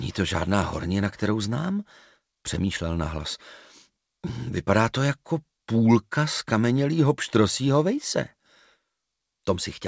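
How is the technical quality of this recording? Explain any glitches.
No glitches or faults can be heard anywhere in the recording. It has the sound of a call path, with everything above 8 kHz missing, which fits a wideband call codec such as G.722.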